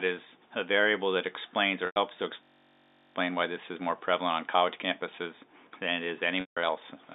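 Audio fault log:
1.86–1.96 s and 6.41–6.57 s, packet loss with pitch repetition: gaps of 100 ms and 160 ms are filled by repeating the last pitch period, giving a held, buzzy tone that fades. A spectrogram shows flat, frozen harmonic lines that fade out.
2.43–3.16 s, system hang loop: a 21.33 ms chunk, which fits a 1024-sample buffer, repeats 34 times at 46.9 Hz, making a steady buzz. The waveform shows identical blocks, and the spectrogram shows evenly spaced vertical stripes.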